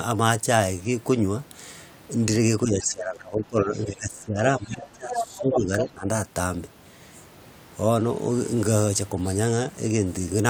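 From 2.64 to 4.37 s the speech dips and thins, with drops of roughly 20 dB. This is speech suppressed in double talk. Both ends were likely talking at once. The echo canceller could not tell the local talker from the loudspeaker echo, so it pulled both down. Inside that stretch, from 3.75 to 3.84 s, the other side's voice leaks through. It is a brief, faint scrap, about 30 dB below the speech. Some far-end sound likely survived the canceller and reached the microphone.

The same pattern returns from 4.59 to 6.07 s. The speech again sinks by up to about 20 dB and loses presence. More far-end leakage sits inside it. From 4.65 to 4.89 s it is quiet, about 25 dB down. From 5.10 to 5.58 s it is much stronger, only about 5 dB below the speech. It comes back at that level from 5.79 to 5.84 s. These stronger scraps come through as a second voice under the talker.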